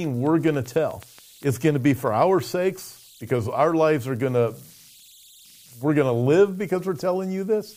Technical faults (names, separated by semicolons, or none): converter idle tones; train of clicks